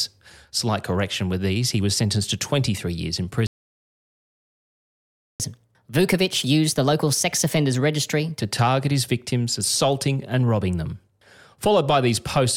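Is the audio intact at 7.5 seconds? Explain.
No. At 7.5 seconds the speech is inside a catch-up at higher speed, which runs from 5.40 to 8.40 s, between "years in" and "to target his victims". After a stall, the player resamples its buffered backlog to play it 1.15 times faster and win back lost time. Speed and pitch rise together, so the voice sounds hurried and about two semitones higher. At 8.40 s it drops back to normal.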